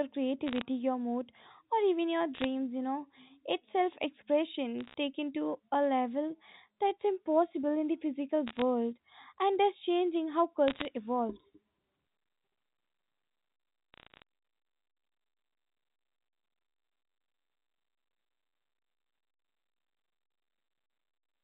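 Bit errors on a digital phone line crackle through the speech at 0.47–0.62, 2.34–2.44, 4.81–4.94, 8.48–8.62, 10.68–10.85 and 13.94–14.22 s. With a few tenths of a percent of bits flipped, single samples jump to wrong values. These show as isolated needle spikes on the waveform and thin full-height vertical streaks on the spectrogram, all under the G.711 A-law band edge at 4 kHz.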